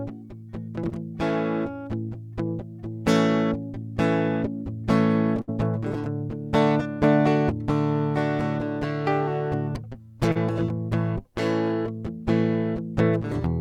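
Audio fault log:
0.89 to 0.93 s and 10.32 to 10.37 s, short concealed packet loss: twice in this music a small piece of the stream arrived too late for the decoder, about 20 ms near 0.89 s and about 40 ms near 10.32 s. The receiver bridged each hole by extending the sound that came just before, then cross-faded back into the real signal, so each spot is heard as a brief smear or wobble where a moment of the music is replaced.
5.41 to 5.50 s, burst of packet loss: here about 60 ms of consecutive audio went missing. The receiver kept the preceding sound going and let it fade as the gap lengthened, so a sustained tone turns into a short held buzz or dwindling hiss. When real packets return the music picks up further along, and whatever fell inside that stretch is simply absent, heard as a small skip.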